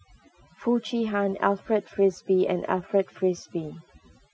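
Overdone noise removal runs throughout the speech: overly aggressive suppression zeroes bands near the noise floor, leaving a blank spectrogram background flecked with isolated specks, and quiet parts of the voice are stripped away with it.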